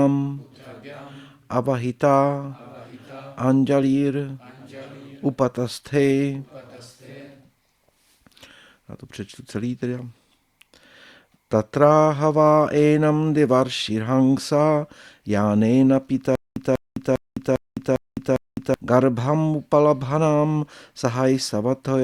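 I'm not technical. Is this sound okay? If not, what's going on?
No. From 16.35 to 18.74 s there is a stutter with silent gaps. A short burst of about 0.19 s plays, then dead silence for about 0.21 s. This repeats six times, roughly every 0.4 s. The likely cause is that the player or stream stalled. Each time it tried again, it replayed the last fragment it had and then ran out. The sound that should have played during those seconds is missing.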